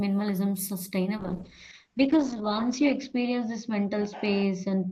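From 1.19 s to the end, a call bitrate drop sets in. The speech turns coarse and watery, and the top end narrows from 20 kHz to about 8 kHz. This fits the encoder being throttled from roughly 32 kbps to 8 kbps, with the lowest rate lasting 1.45 s.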